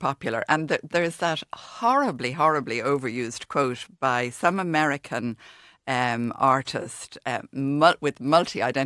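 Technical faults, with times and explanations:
Throughout: resampler restarted on every block. The 48 kHz to 24 kHz conversion handled each 40 ms block in isolation, leaving an edge error on every block. This produces a 25 Hz ticking buzz during speech, seen as faint vertical spectrogram lines every 40 ms that vanish in pauses.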